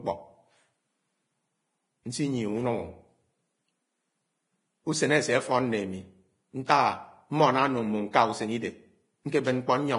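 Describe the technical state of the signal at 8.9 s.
At 8.9 s the speech sounds hissy and grainy, with nothing above 10.6 kHz, and this runs through the whole clip. The likely cause is heavy Vorbis compression at a low bitrate, around 28 kbps: coarsely quantised treble turns into noise rather than going dull, unlike a plain low-pass.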